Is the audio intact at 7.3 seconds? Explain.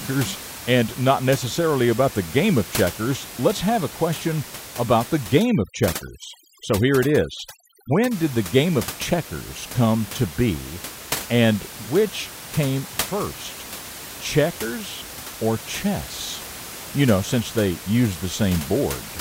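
No. At 7.3 seconds the clip is inside a stretch of overdone noise removal running from 5.40 to 8.11 s, starting after "a question about the" and ending before "did the game of". The noise reduction was pushed too hard against room noise sitting about 13 dB below the speech, so any frequency band close to its noise estimate is cut nearly to nothing, along with the softer parts of the speech. The background drops and breaks up into twinkling, warbling specks.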